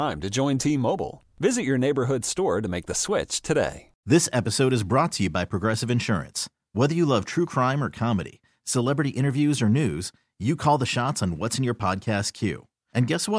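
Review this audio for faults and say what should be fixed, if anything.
Nothing needs fixing, as the speech signal has no interruptions, dropouts or distortion anywhere in the recording.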